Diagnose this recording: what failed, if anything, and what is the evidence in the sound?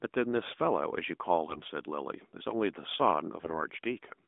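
AMR bit errors on the radio link, between 1.50 and 1.69 s: the sound keeps its rough pitch and level but turns hoarse and gargly. On a spectrogram, clean harmonic striations smear into ragged noise within the usual narrowband 200 Hz to 3.6 kHz band. Bit errors at a rate of a few percent corrupted the finer pitch, gain and pulse values across roughly nine 20 ms frames.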